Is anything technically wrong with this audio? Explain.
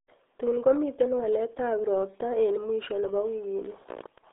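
Yes. Throughout, the speech carries RealAudio 14.4 codec damage. The sound points to a very low bitrate, around 8 kbit/s, built for dial-up modems. Content sits in a narrow 300 Hz to 3.6 kHz band, with nothing above 3.8 kHz. Heavy coding makes the voice muffled and gargly.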